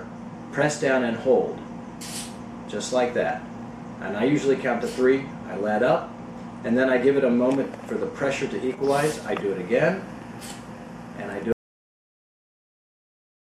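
At 11.52 s the sound cuts off abruptly into silence, with no room tone, through to the end: an audio dropout to silence, likely from a lost input.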